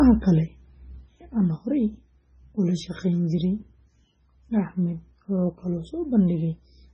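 Heavy data reduction from the start, likely MP3 compression at a very low bitrate, consistent with around 16 kbps, has starved the encoder of bits. It has cut the treble outright, leaving nothing above 9.8 kHz, and zeroed weaker frequency lines that flicker on and off between frames. Across the whole speech clip that produces a dull, watery, swirling texture, with metallic chirps on s sounds and softened, smeared consonant attacks.

At 1.34 s one channel drops out and stays lost through the end of the clip, likely a failed stereo channel feeding a mono sum. The material shared by both sides falls abruptly by about 6 dB, so the speech suddenly sounds quieter from that point on.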